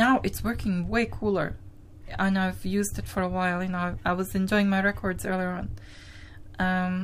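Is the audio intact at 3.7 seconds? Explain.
Yes, the audio is intact at 3.7 seconds, with no dropout, click, distortion or other fault there.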